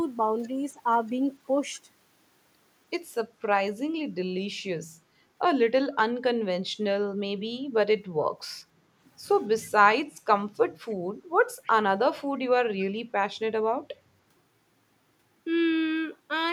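At 10.9 s and again at 11.64 s, brief scraps of echo leak appear in the speech: each is a faint, roughly 50 ms delayed copy of the talker arriving about 292 ms after the original, the second somewhat louder than the first, though both sit far below the direct speech. The likely cause is a far-end loudspeaker whose echo canceller let residual pickup through. On a spectrogram, each shows as a pale, thin smear repeating earlier harmonic patterns; the waveform barely changes.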